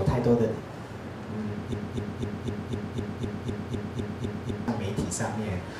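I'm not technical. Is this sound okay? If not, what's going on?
No. Playback likely stalled and kept resending one scrap, a broken-record loop. From 1.74 to 4.68 s, a quarter-second piece repeats twelve times, replacing what belonged there.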